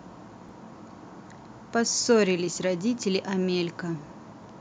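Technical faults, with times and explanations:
0.49 s, repeated buffer: a piece about 1.5 ms long plays twice with a hard join, fitting a 64-sample buffer, so it sounds like a tiny click, not a silent gap.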